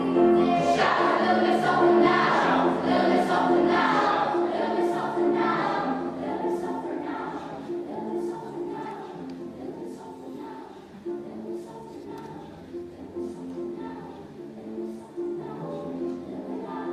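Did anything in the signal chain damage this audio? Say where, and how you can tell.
Yes. Compressed frames skipped at 14.27 s in the codec stage: about 40 ms vanishes, likely a couple of 20 ms frames.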